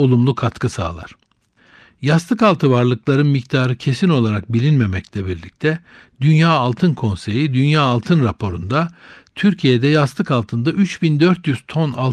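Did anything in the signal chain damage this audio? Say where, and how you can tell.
No, nothing along the chain seems to have damaged this speech, and I can't hear anything that points to a particular stage.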